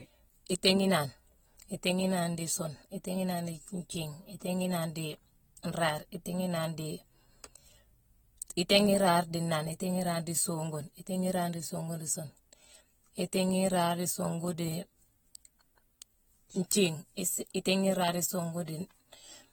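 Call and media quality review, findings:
Plainly audible coding damage across the whole speech clip. Smeared, fizzy texture on sibilants. No content above 19.4 kHz. Likely AAC compression, AAC-LC; damage level fits roughly 45 kbps. Coarse frequency-line quantisation at that rate discards spectral detail.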